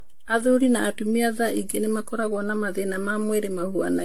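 Throughout the speech, the sound is swirly, smeared and hollow, with blurred consonant attacks and nothing above 19.2 kHz. This is likely generation loss: the texture points to about ten passes through an AAC-LC encoder near 96 kbit/s, each requantising on a shifted frame grid.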